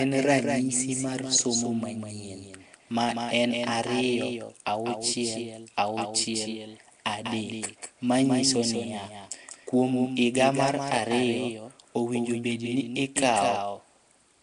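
From the very start and all the way through, the speech has a second copy of itself trailing along behind, a bit quieter, about 5 dB down, and roughly a fifth of a second late. That's a doubled audio track. It's full-band, with no reverb tail or room colour on it, so it reads as a hard slapback rather than an echo. It's most likely the same signal getting mixed in twice, either through a second, slower capture path or through an edit that left two copies out of step.

Sitting on top of that for the whole clip is a plainly audible codec texture: a rough, hissy halo around the speech and a smeared, underwater quality, with nothing at all above 10.7 kHz. That's the sound of Nellymoser compression, the old Flash microphone codec, and it fits a 44 kbps stream. The codec works in small fixed blocks with a tight bit budget, so quieter bands get no bits and are filled in with noise, which is where the hiss and the smearing come from.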